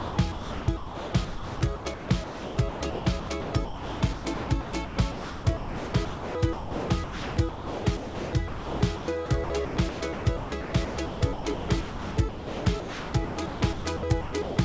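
From 0.0 s to 14.57 s the sound is repeatedly chopped by the voice detector, likely the sender's detector toggling transmission on and off across the whole clip. In total about 9.05 s of the signal is replaced by a low, steady hiss consistent with standard comfort noise, so quiet portions and onsets drop out. Throughout, the call path's band limit leaves nothing above 8 kHz.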